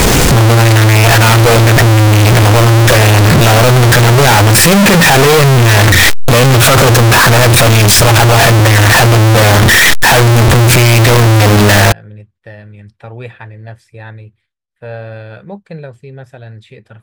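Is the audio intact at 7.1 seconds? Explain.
No. At 7.1 s the speech falls inside a fault running from the start to about 11.92 s that sounds like float read as integer: very loud, harsh and buzzy, with background noise as loud as the speech, though pitch can still be followed. The likely cause is 32-bit float samples decoded as 32-bit integers, where sign and exponent bits set each value, squaring the waveform at an almost fixed, high level. Unlike clipping, even quiet gaps are pushed up to that level.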